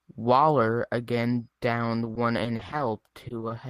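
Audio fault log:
2.05 to 3.51 s, repeated packet loss (robotic sound): The speech turns choppy over this stretch. Sound keeps dropping out in quick succession, in what sounds like a dozen or so short holes, none longer than 30 ms. Each hole is filled by stretching the last bit of sound forward. About 190 ms is patched this way, roughly 13% of the span. The repeated patching gives the robotic edge and the missing pieces.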